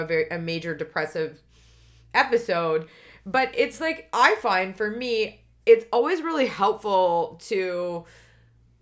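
Speech recording, no technical faults heard.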